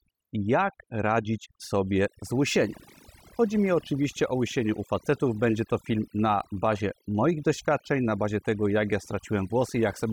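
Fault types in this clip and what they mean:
Overdone noise removal: A noise reduction stage was pushed far too hard across the whole speech clip. It cuts individual frequency bands whenever they sit close to its noise estimate. The background drops and breaks up into twinkling specks. Quieter parts of the voice vanish too.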